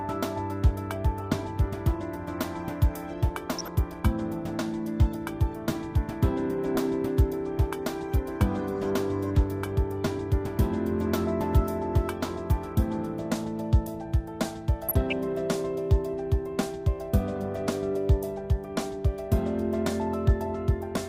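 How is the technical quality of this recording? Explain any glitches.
The recording has two short glitches, both DAB burbling. The first runs from 3.49 to 3.68 s, and the second from 14.88 to 15.13 s. Weak reception let bit errors slip past error correction into the MP2 data, putting short blips of noise into individual sub-bands. The second burst is slightly longer, at a lower error rate. Both come through as brief bursts of burbling over the programme.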